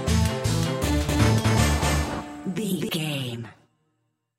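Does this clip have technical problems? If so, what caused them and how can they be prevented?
Yes. A doubled audio track runs from 1.09 to 2.89 s, with an equally loud, dry copy trailing by around 300 ms, likely from a second, slower capture path. Prevent it by routing each source through only one input path and muting any duplicate monitoring or capture route.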